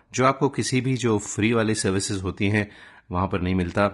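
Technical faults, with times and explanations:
Throughout, low-delay AAC compression: the speech sounds rough and grainy, with a hiss filling the gaps between harmonics and a thin, artificial-sounding top band, plainly audible across the clip. This is likely low-delay AAC coding, as in AAC-ELD, at a rate that fits about 32 kbps. Its short low-delay frames code about 500 frequency lines each, and at this low rate coarse quantization leaves noise between the harmonics, which sets it apart from ordinary AAC swirl or a simple band-limit.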